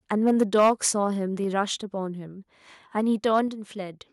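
From 0.26 to 0.88 s the loudest syllables turn harsh and crackly, their peaks flattened; this is likely microphone overload, with the input driven about 8 dB past the converter's ceiling so a few percent of samples are clipped. Within that stretch, at 0.43 s, the speech and the background drop abruptly by about 2 dB, and again at 1.44 s by about 3 dB. These are likely the microphone volume stepped down by the call software reacting to the overload. A brief crackly overload returns from 3.33 to 3.40 s, about 2 dB over and clipping a few percent of samples, and at 3.48 s the level falls once more, by about 4 dB.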